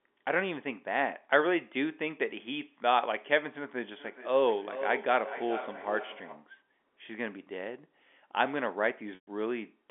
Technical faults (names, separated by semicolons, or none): feedback echo between two devices; packet loss with pitch repetition